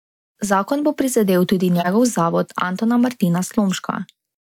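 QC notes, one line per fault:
1.76–1.88 s, corrupt frame decoded: just after "bo prizadel tudi", a harsh burst cuts across the speech. A few compressed frames arrived with damaged bits, and the decoder played them anyway. Misread gains and codes put energy in the wrong bands, peaking loud, around -5 dBFS.
3.72–3.79 s, corrupt frame decoded: a shorter, somewhat quieter blip of the same kind. Again a few damaged frames were decoded, so it lasts only about as long as those frames.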